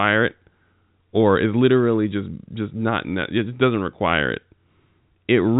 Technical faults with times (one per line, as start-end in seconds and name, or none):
none